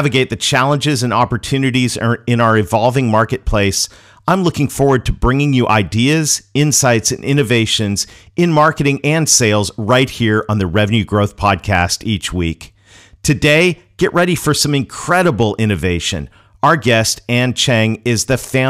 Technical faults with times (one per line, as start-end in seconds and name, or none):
0.00-18.69 hard clipping